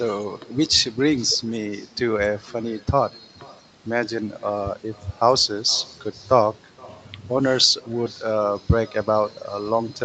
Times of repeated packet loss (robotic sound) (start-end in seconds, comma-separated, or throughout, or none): none